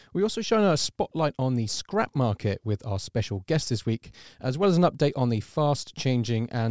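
No technical faults can be heard anywhere in the signal.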